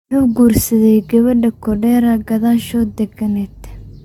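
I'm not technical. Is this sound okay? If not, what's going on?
No. Throughout the clip, the speech sounds swirly and hollow, as if heard through a watery tube, and the starts of sounds are soft and smeared. The very top of the sound, above about 17 kHz, is missing. This is generation loss. The recording was likely compressed and decompressed about five times. Each round throws away a little more detail in slightly different places, so the damage piles up.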